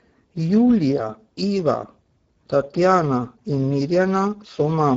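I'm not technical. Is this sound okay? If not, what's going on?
No. The speech sounds hoarse and grainy from start to finish. This is Speex codec damage: an older voice-chat compression that keeps too little detail, so the voice is rebuilt roughly, and nothing above about 7.7 kHz survives.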